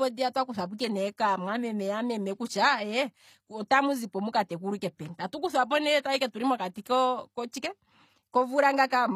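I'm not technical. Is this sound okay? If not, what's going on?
No, not quite. All the way through, the speech has a gritty, metallic edge, and the s sounds come out lispy. That's likely HE-AAC compression: it keeps the lower sounds, then fakes the treble by copying lower parts upward, which doesn't quite match.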